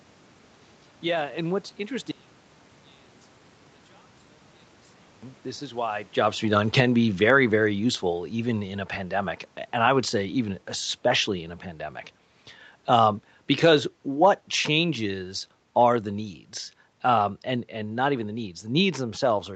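A speech recording with two faults. From 2.11 to 5.23 s, after "yeah and what's", the voice drops by about 31 dB to a faint trace. One channel inverted is the likely cause, cancelling the centred voice in a mono sum. From 6.42 to 8.69 s, after "is why jobs" and before "a pandemic", the level sinks by about 5 dB along with the room background. This is automatic gain falling.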